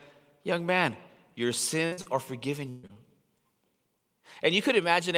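A burst of packet loss at 1.85 to 1.93 s, just after "man your", removes about 60 ms of speech. The receiver stretches the last sound across the hole and lets it sag in level before the stream jumps ahead.

Short concealed packet loss follows right away at 1.93 to 1.99 s and again at 2.01 to 2.07 s, leading into "are forgiven". Each drop is about 40 ms, patched by continuing the preceding pitch or noise and then crossfading back into real audio. The result is a quick smear and wobble at the start of the phrase, and a brief consonant could disappear inside it.

A longer burst of packet loss at 2.69 to 2.85 s, after "are forgiven", removes about 140 ms. It is bridged entirely, with no silence. The continued sound fades into a dull buzz or hiss, and the resumed audio lands further along.

Two more short concealed packet losses at 2.87 to 2.91 s and 2.93 to 2.97 s, each about 20 ms, add a brief smear or wobble as the audio recovers.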